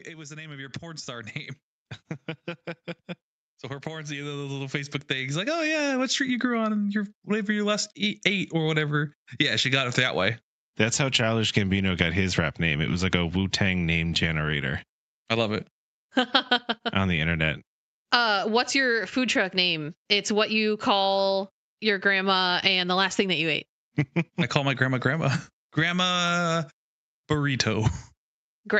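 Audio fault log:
0.05–1.38 s and 3.83–6.0 s, automatic gain rising: speech and background swell together, by about 6 dB and then about 11 dB. The gain control judged the input too quiet and raised its gain gradually over each span, not instantly.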